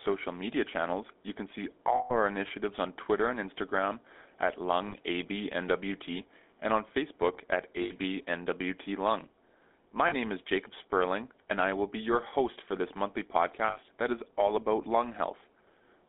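GSM full-rate codec throughout: the speech is confined to roughly 250 Hz–3.6 kHz, consistent with 13 kbps pulse-excited coding, leaving a plainly buzzy, gravelly roughness.

Lost GSM frames at 1.96 s (140 ms), 4.88 s (40 ms), 7.82 s (80 ms), 10.08 s (40 ms) and 13.68 s (80 ms): missing frames are filled by repeating the last good one, producing a brief rough, metallic ring.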